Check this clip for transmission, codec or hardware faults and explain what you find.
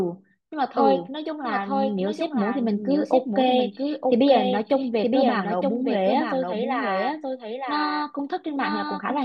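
One fault runs through the whole clip: a doubled audio track. The speech is heard a second time roughly a second later, a full-band copy somewhat quieter than the original, about 5 dB down. The copy carries no decay or room colour, so it sounds like a distinct second voice trailing the first rather than an echo. This is likely the same signal captured again over a slower path and mixed back in.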